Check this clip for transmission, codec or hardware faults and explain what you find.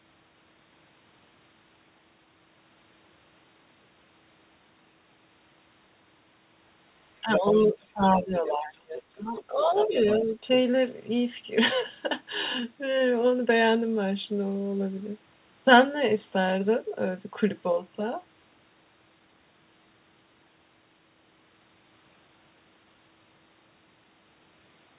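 Two echo-canceller faults show up in this speech, both clustered between 7.2 and 10.6 s. Throughout, the sound has no content above 4 kHz, which fits a narrowband G.711 mu-law call path.

Speech suppressed in double talk, 7.21 to 8.02 s and 8.18 to 10.45 s. When both ends talk at once, the echo canceller likely mistakes the local talker for loudspeaker echo and attenuates everything. The speech sinks by up to about 20 dB, breaking into dipped, dulled fragments for roughly 0.7 s in the first span and 1.5 s in the second, rather than staying continuous.

Other side's voice leaking through, at 7.33 to 7.53 s, 8.05 to 8.38 s, 9.34 to 9.44 s, 9.77 to 9.93 s and 10.52 to 10.57 s. Residual loudspeaker echo likely survives the canceller and reaches the microphone signal. A second voice appears in short scraps. The strongest, at 7.33 s, sits only about 5 dB under the speech. The later ones are fainter, from about 10 to 20 dB down.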